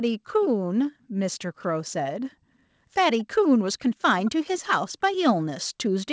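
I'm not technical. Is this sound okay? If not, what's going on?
No. There is an echo leak: faint delayed copies of the speech, about 0.22 s late, at 1.62–1.67, 3.18–3.24, 4.25–4.31 and 6.02–6.06 s. Likely a loudspeaker's echo canceller missed them.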